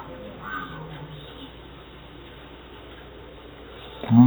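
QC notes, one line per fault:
Throughout, stereo read as mono: the left and right samples were taken one after another as a single channel, so every moment lasts twice as long. The speech runs at half speed, an octave (12 semitones) low, with a faint mirrored copy in the upper spectrum.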